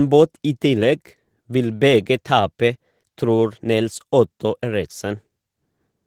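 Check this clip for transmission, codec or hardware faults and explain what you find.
There's one codec fault here, running the whole way through. The speech has Opus voice compression: a hybrid, sharing its few bits between low-band prediction and a thin top layer. It sounds hoarse and slightly robotic, pointing to roughly 16 kbps.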